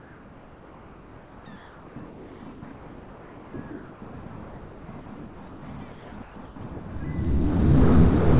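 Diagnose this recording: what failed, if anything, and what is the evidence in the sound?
The gaps between sounds have been swapped for comfort noise in place of the background: flat, detail-free hiss from 0.0 to 4.02 s, then 4.48 to 4.88, 5.16 to 5.62 and 5.92 to 6.56 s. In the second gap the fill sits about 2 dB below the real background. Likely a call-processing stage: discontinuous transmission stops sending between sounds, and the receiver synthesises shaped noise. The band stopping at 4 kHz fits G.711 at 64 kbps.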